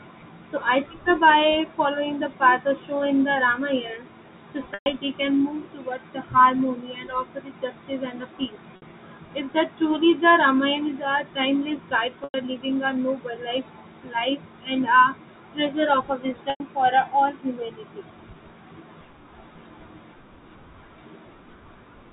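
Packet loss with pitch repetition interrupts the speech four times: at 4.74 to 4.86 s (120 ms), 8.76 to 8.82 s (60 ms), 12.24 to 12.34 s (100 ms) and 16.50 to 16.60 s (100 ms). Each time, the receiver bridges the missing audio by looping the last pitch period, which fades out over about 50 ms. The 60 ms gap sounds like a briefly held, buzzy tone. The three longer gaps decay into silence before the speech cross-fades back in. The G.711 telephone band limit stays audible throughout.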